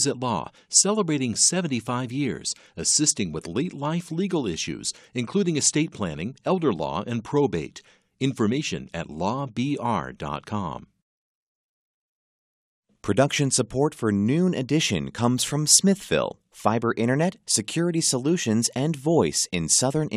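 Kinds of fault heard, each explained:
No technical faults can be heard in the signal, which stays steady and continuous throughout the speech.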